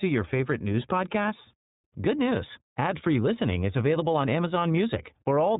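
From start to finish the speech passes through the iLBC codec: nothing above 3.8 kHz survives, and each frame, likely 30 ms at 13.33 kbps, is coded independently, giving a plainly rough, synthetic sound that a simple telephone band-limit would not add.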